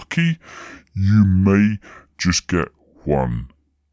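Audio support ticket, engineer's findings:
Wrong sample rate, whole clip. Speech runs slow and sits low: speed about 0.73x, pitch down about 5.6 semitones. Probable component: playback/output stage reading the stream at too low a clock, fits audio captured near 22 kHz played at 16 kHz with no resampling. Distinguishing sign: pitch and tempo drop by the same ratio together. A time-stretch would keep pitch; a pitch-shifter would keep duration.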